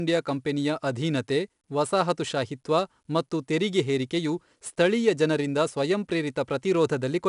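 Speech carrying 4-bit ADPCM compression throughout. Each sample is coded as a coarse step from a prediction, so gritty hiss rides on every loud syllable and sharp onsets distort. Nothing is heard above 10.6 kHz, which fits a low sample rate and roughly 88 kbps.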